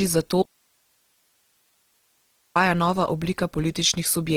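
From the first moment the speech carries Opus compression damage, most likely from encoding in its music (CELT) mode at a rate that fits about 16 kbps. The band energies survive, but the fine detail within them is patched with folded copies of lower bands and noise, so the voice sounds grainy, rough and hissy rather than swirling. A spectrogram shows content reaching up to 20.3 kHz, yet the upper bands look smeared and speckled instead of carrying clean harmonics.

At 0.43 s comes an audio dropout to a faint residue. The speech cuts off abruptly and stays gone until 2.56 s, a gap of 2.13 s, before returning mid-flow just as suddenly. The likely cause is a break in the signal feed while the downstream path stayed live, so the gap holds only hiss, roughly 45 dB below the speech. The waveform collapses to a thin flat band with vertical edges, and the spectrogram shows an even, faint noise floor.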